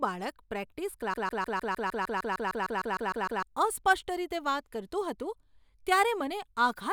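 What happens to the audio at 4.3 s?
Nothing goes wrong at 4.3 s; the speech carries straight through that moment with no dropout, click, distortion or other fault.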